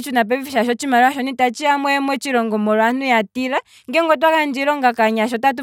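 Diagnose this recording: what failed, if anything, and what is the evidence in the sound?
Nothing here points to a failure at any stage; the speech comes across without a single event worth flagging, so there's nothing to diagnose.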